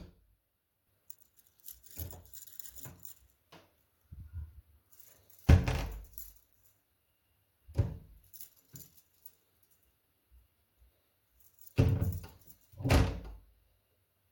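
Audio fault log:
1.10–1.23 s, 5.08–5.13 s, 11.63–11.69 s: frames out of order. Two adjacent blocks of frames, 64 ms each at 1.10 s and 21.3 ms each later, were decoded in swapped order, so each stretch plays with its halves exchanged. This gives a garbled flutter, but no time is lost.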